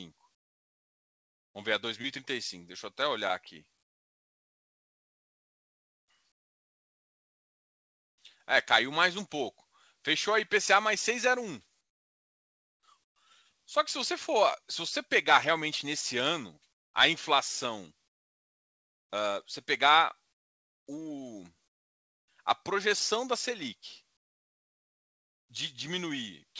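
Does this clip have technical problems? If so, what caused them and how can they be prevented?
Yes. The pauses in the speech have comfort noise in place of the background at 0.35–1.55, 3.83–6.08, 11.81–13.16, 16.73–16.94, 18.08–19.10, 20.33–20.87, 21.68–22.28 and 24.17–25.49 s. In each gap the real room sound gives way to a flat, featureless hiss, in all but the 11.81–13.16 s gap about 22 to 26 dB quieter. The likely cause is discontinuous transmission. The sender stops sending audio when no one speaks, and the receiver plays synthetic noise instead. The audio also stops at 8 kHz, consistent with a G.722 call codec. To prevent the swap, turn off discontinuous transmission on the sending side.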